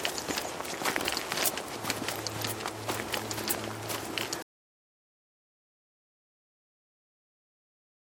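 At 4.42 s the audio cuts off abruptly and never returns. This is an audio dropout to silence. The sound stops in mid-flow, with no fade. For the remaining 3.8 s or so there is silence. No room tone or background hiss survives. Whatever was present in that stretch is lost. The likely cause is a lost input, such as a disconnected device or a stray mute, while recording continued writing silence.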